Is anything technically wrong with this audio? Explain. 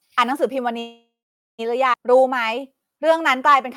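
Yes, there are three separate playback faults in this speech clip.

From 0.79 to 1.61 s there is a call audio freeze: the last sound is held as a fading buzz or hiss that drops to silence for roughly 0.46 s, then speech resumes where it left off. About 0.79 s is inserted and nothing is lost. This likely comes from delayed packets leaving the jitter buffer empty.

At 1.93 to 1.95 s the audio skips ahead. It jumps forward with almost no gap, and roughly half a second of speech is missing, with the two sides spliced nearly directly. A stretch of audio was discarded while later packets were already queued.

From 2.10 to 3.68 s there is a jitter buffer slow-down. Speech plays at about 90% speed but keeps its pitch, and sounds are drawn out. The receiver repeated single pitch periods to rebuild its reserve, adding 161 ms over the stretch.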